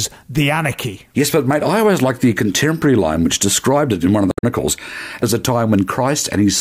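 Damaged data in a compressed stream appears at 4.30 to 4.44 s in this speech. Corrupted bytes made the decoder misread frames and lose sync while hunting for the next frame header, producing a brief chirp, squawk, click or short hole of about 0.14 s before the speech resumes.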